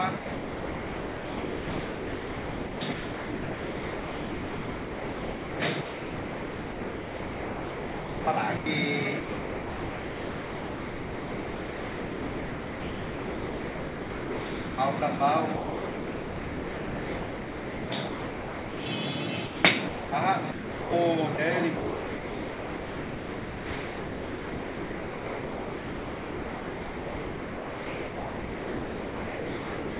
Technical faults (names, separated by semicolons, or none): sound chopped by the voice detector; sound dropped by the voice detector